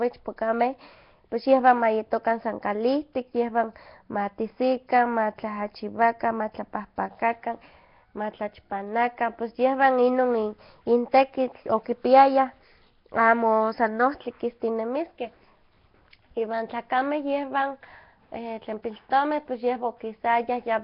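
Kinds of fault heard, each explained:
Nellymoser compression: The speech carries a rough, hissy halo and a smeared, underwater quality throughout, with nothing above 5.3 kHz. The damage is heavy. It likely comes from the old Flash microphone codec, which fits a bitrate near 22 kbps and fills starved bands with noise.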